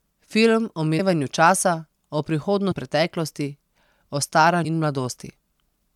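Compressed frames are skipped at 0.98, 2.71 and 4.64 s. Missing frames make the speech jump ahead about 150, then 300, then 300 ms.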